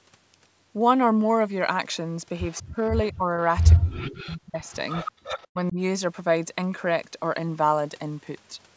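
From 2.51 to 2.67 s a faint repeat of the speech trails it by 191 ms, about 25 dB down. This is an echo leak, likely a loudspeaker echo that the far side's echo canceller did not fully remove. A room reflection would blur the sound, but this is a distinct, delayed copy. It returns from 3.14 to 3.77 s at about 20 dB down and from 4.66 to 5.48 s at about 10 dB down, growing more intrusive each time.

After the first stretch, from 2.73 to 3.24 s, the main voice dips in short pieces by up to about 25 dB. This is speech suppressed in double talk, likely the canceller treating the overlapping voice as echo. It happens again from 3.77 to 4.61 s, where most of the span sinks by up to about 40 dB, and from 5.53 to 5.78 s for a brief dip of about 20 dB. A network dropout would cut to silence, but here the level is pulled down.

From 5.12 to 5.25 s, during the strongest echo, the room sound itself drops by about 40 dB for a brief moment and then returns. 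This is background gated by the echo canceller. It differs from double-talk suppression because the ambience vanishes, not just the voice.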